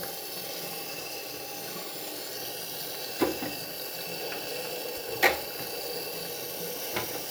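Nothing goes wrong anywhere in this recording; there's no technical fault to point to from beginning to end.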